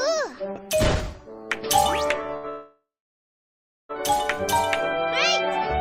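A short stall from a late packet comes first, at 2.37 to 2.46 s. The jitter buffer ran dry, so the last sound is held for about 68 ms with a faint buzz or dip. Nothing is lost, and the audio resumes from the same point, 68 ms late. A call audio freeze follows at 2.50 to 3.91 s. The last sound is continued as a fading buzz or hiss, then about 1.04 s of silence. This is likely packets held up in transit. The audio then carries on with nothing missing, but about 1.4 s later than before.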